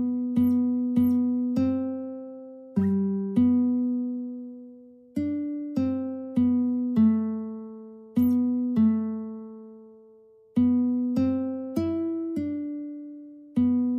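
Nothing is technically wrong with this audio: no faults can be heard anywhere in it.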